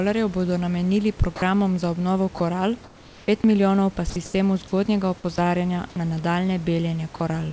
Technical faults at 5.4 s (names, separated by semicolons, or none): sound dropped by the voice detector